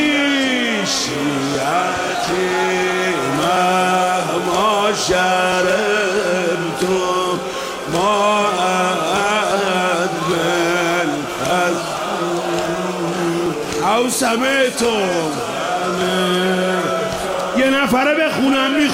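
Short skips occur at 1.55 to 1.58 s, 5.52 to 5.55 s, 7.54 to 7.56 s, 11.50 s and 13.46 s. Each is an overlap between stream segments. The time stamps of two neighbouring 2 s segments overlapped. The player trimmed that span away, though the sound was never duplicated. Between 8 and 29 ms of audio is lost each time. The waveform jumps across the gap. Each one is heard as a click or tiny hop forward in the sound.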